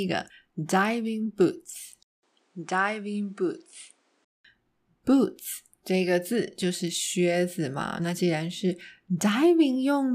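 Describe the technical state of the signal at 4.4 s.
At 4.4 s the speech is still inside a stretch from 2.03 to 4.445 s where the input has switched to a poorer device, likely a different microphone or headset profile. After a 200 ms silence at the switch, nothing is heard above 10.5 kHz, the level sits about 5 dB lower, and a new noise floor appears roughly 40 dB down. That combined shift in bandwidth, level and noise, rather than bandwidth alone, separates it from a simple low-pass filter or codec change.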